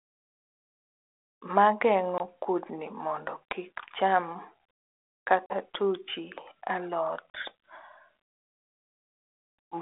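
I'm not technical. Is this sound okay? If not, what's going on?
No. Packet loss on an ADPCM call happens three times: at 2.18 s, 5.46 s and 7.30 s. Each time the speech drops into a sharp-edged gap of silence, about 20 ms long at first and 40 ms the other two times, which suggests one or two small chunks of the call went missing. The phone's decoder guesses each next bit of sound from the last, so after a gap it is briefly out of step. The speech comes back with a little roughness, then settles within a few tens of milliseconds.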